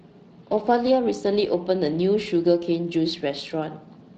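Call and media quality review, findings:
Speex codec, throughout: hoarse, grainy, noisy speech texture from a starved CELP excitation, consistent with a mid-rate setting near 22 kbps. Spectrogram shows blurred harmonics with noise filling between them.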